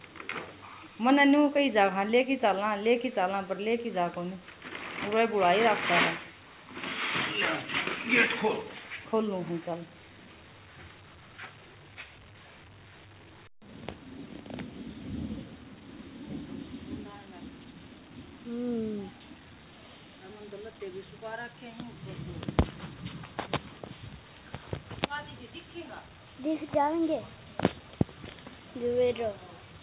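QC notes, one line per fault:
No faults found in this clip. The WebRTC call path can be heard in the band limit, with nothing above 4 kHz, which fits G.711 A-law at 64 kbps.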